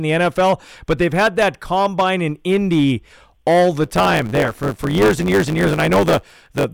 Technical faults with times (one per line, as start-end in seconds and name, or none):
0.00-6.74 hard clipping
3.83-6.64 block size mismatch (truncated)